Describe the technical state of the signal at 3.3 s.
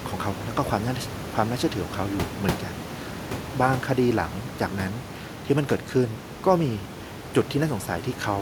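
At 3.3 s the speech is intact, with only the room's own background noise sitting about 13 dB beneath it.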